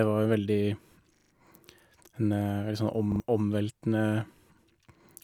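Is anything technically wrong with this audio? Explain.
Yes. Repeated buffers occur at 1.16 to 1.32 s and 3.12 to 3.2 s. Late audio made the device replay one roughly 40 ms piece, producing a hard-edged stutter.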